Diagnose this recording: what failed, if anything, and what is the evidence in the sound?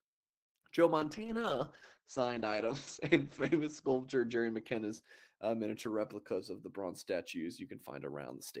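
A call bitrate drop in the codec stage runs from 0.99 s to 7.15 s: the speech turns rough and watery, and its top end collapses from 20 kHz to 8 kHz. This fits Opus being pushed from 40 kbps to 9 kbps and held at its lowest for about 2.35 s. There are no gaps, as packet loss would leave. The coarse texture alongside the muffling rules out a plain low-pass filter.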